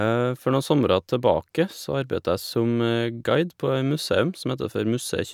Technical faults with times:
none

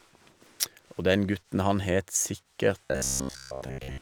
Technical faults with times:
2.85-4.01 robotic sound from repeated short buffers

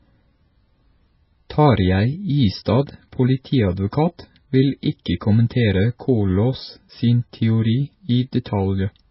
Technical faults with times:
0.00-9.10 MP3 compression

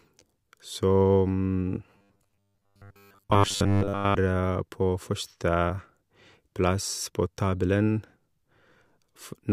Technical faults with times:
1.91-4.16 robotic sound from repeated short buffers

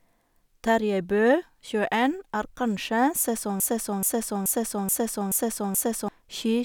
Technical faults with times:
3.60-6.08 broken-record loop

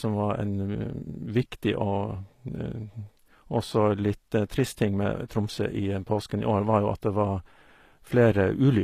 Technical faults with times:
0.00-8.83 HE-AAC compression

